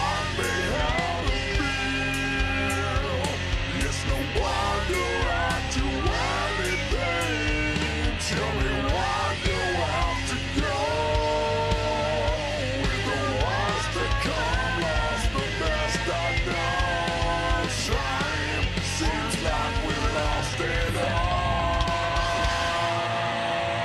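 Throughout the clip, the sample-rate conversion from 44.1 kHz to 48 kHz was run as a resampler restarted on every block, with each 40 ms block converted in isolation. At every block boundary the interpolation filter lacked the true neighbouring samples and filled in with silence or wrapped-around data, leaving a small discontinuity. These errors recur 25 times a second, heard as a steady ticking or low rasp that rides along with the sound and disappears in quiet passages.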